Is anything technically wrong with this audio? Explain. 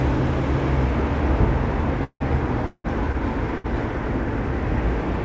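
Yes. There are two call audio freezes and one short stall from a late packet in this recording of everyday sound.

At 2.04–2.22 s and 2.66–2.86 s, a call audio freeze occurs, likely from packets held up in transit that emptied the jitter buffer. The last sound is extended as a fading buzz, with about 70 ms and 50 ms of silence, then resumes where it stopped.

At 3.58–3.66 s, a short stall from a late packet stretches the sound by 65 ms until the packet arrives, causing a brief held sound with a slight dip. Nothing is lost.

The audio has no content above 8 kHz, which fits a G.722 call codec at 64 kbps.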